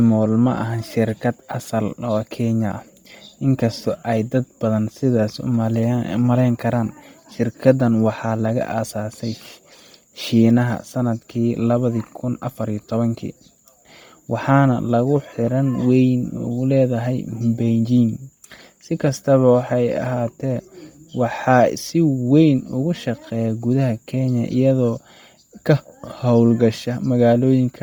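Throughout the speech, Bluetooth LC3 compression, likely at a low bitrate, leaves a breathy, grainy edge; the spectrogram shows speckled, noise-filled upper bands and 10 ms frame blocking.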